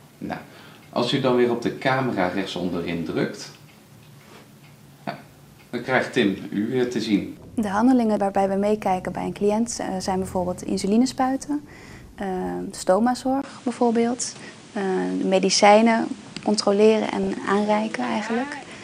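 At 13.42 s the audio drops out for about 20 ms. From then to the end it stops above 10.5 kHz, its level shifts by about 5 dB, and new background noise sits about 30 dB below it. The likely cause is an input switched to a poorer device. A fixed new band limit, new noise and a new level all arriving together set it apart from a codec or filter change. From 17.23 to 17.27 s, DAB burbling adds short blips of noise in a 40 ms patch. It involves about five damaged MP2 frames with a bit error rate near 0.15 percent. Blips confined to single sub-bands, rather than broadband clicks or dropouts, separate it from packet loss.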